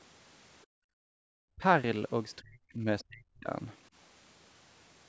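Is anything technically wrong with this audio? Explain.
Yes. There are three kinds of fault, all tied to echo cancellation on a call.

Background gated by the echo canceller: from 0.65 to 1.28 s the room sound sinks by up to about 40 dB and then returns. While the loudspeaker was playing, the canceller clamped the microphone hard, and released it once playback stopped.

Speech suppressed in double talk: the talker's voice dips sharply at 1.56–1.64 s, 2.41–2.86 s and 3.02–3.49 s. The shortest dip is a brief chop, and the later two are deeper, reaching roughly 35 and 40 dB down. The likely cause is both sides talking at once, so the canceller turned down the talker along with the echo.

Other side's voice leaking through: at 3.00–3.04 s a brief, faint scrap of a second voice appears, far below the talker. It likely comes from loudspeaker playback that the canceller failed to remove fully from the microphone.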